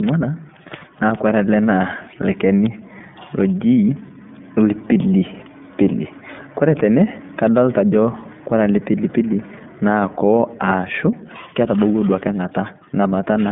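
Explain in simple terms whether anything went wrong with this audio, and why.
Yes, a couple of things went wrong. The whole recording has gone through the iLBC codec, the kind of squeezed phone-line coding used for internet calls. It chops the speech into 30 ms chunks and rebuilds each one from scratch, which leaves the voice sounding a bit rough and synthetic. Everything above roughly 3.8 kHz is gone, and the very low end below about 150 Hz is thinned out, so the speech sounds narrow and boxy, like an old phone call. The damage is easy to hear.

Then at 2.66 s there's a single sharp snap sitting on top of the speech, over in a few thousandths of a second. That's an electrical switching spike, most likely a switch, motor or bit of static nearby arcing briefly, with the audio line catching the jolt. It isn't part of the voice at all, just an added click that cuts through for an instant.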